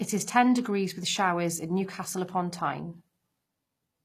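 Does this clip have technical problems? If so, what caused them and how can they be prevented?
Yes. Throughout the speech there's plainly audible HE-AAC compression damage. The top end sounds bright enough, but it isn't the real treble. The codec likely kept only the lower spectrum and faked the highs with spectral band replication, copying lower bands upward under a coarse envelope, which fits a stream of about 24 kbps. Harmonics don't line up across that crossover, so s sounds come out gritty, metallic or lispy. To prevent it, encode at a higher bitrate with plain AAC or another full-band codec instead of HE-AAC.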